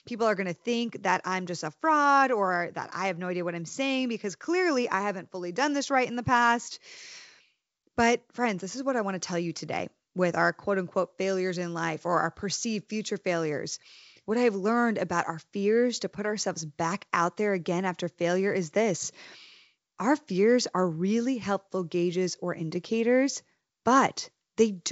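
No technical faults are audible.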